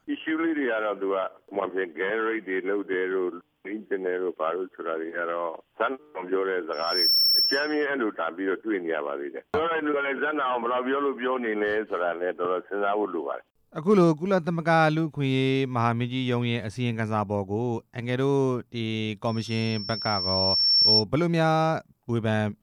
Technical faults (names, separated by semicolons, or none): loudspeaker feedback squeal